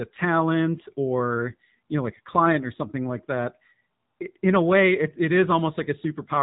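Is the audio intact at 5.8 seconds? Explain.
No. At 5.8 s, as across the whole clip, the speech carries AMR narrowband mobile codec damage: a vocal-tract model rebuilds the voice from sparse pulses, sounding buzzy and synthetic, which fits a low AMR-NB rate near 7.4 kbps. A spectrogram shows nothing above 4 kHz.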